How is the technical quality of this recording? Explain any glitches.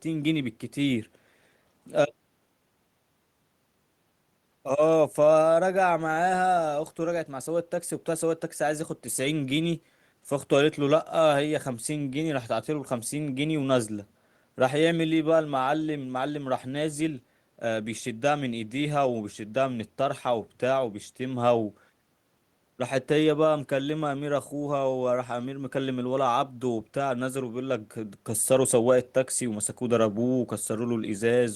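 No technical faults are audible anywhere in the recording, so there are no glitches to explain.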